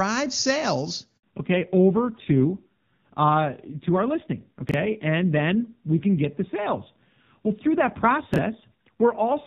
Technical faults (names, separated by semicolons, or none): handover gap; fallback to narrowband; chunks out of order